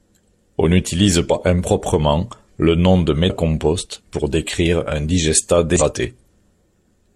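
Three short glitches of damaged data in a compressed stream, at 1.26–1.31 s just before "improprement le nom de", 3.25–3.31 s after it, and 5.76–5.82 s after "pour décrire un digestat". Each time the decoder hits corrupted frames, misreads or drops them, loses sync, and searches for the next frame header.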